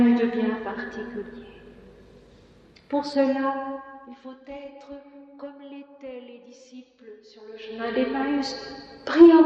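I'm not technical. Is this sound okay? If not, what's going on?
No. Zipper noise: the volume was changed in small jumps, not smoothly, so a fast ticking or zipping rides on the sound as it fades down from 3.16 to 4.46 seconds and comes back up from 7.46 to 7.98 seconds.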